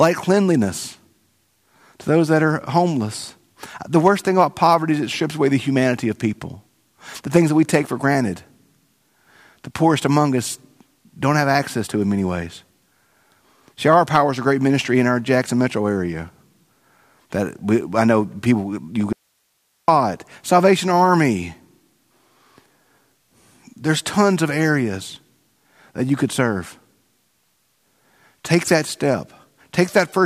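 The input likely dropped while the path stayed live, so from 19.13 to 19.88 s the speech cuts abruptly to faint hiss: an audio dropout to a faint residue.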